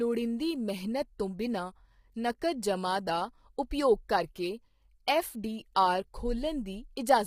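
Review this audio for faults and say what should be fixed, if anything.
Throughout the clip, a low-delay AAC compression stage, likely AAC-ELD squeezed to roughly 24 kbps, uses short frames that resolve harmonics poorly, so the speech sounds heavily rough and grainy. Send the stream at a higher bitrate, or use a longer-frame codec where the extra delay is acceptable.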